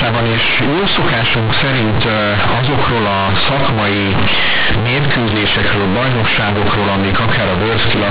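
From start to finish the speech is harsh and far too loud. The cause is companded audio read as linear. The bytes are G.711 mu-law, but playback treats them as plain 8-bit samples and never expands them. Every sign change throws the output across about half its range. Quiet passages come out as large as loud ones. The waveform is badly bent. It sounds like a heavy buzzy distortion, with strong noise filling the pauses. The underlying telephone band is capped at 4 kHz.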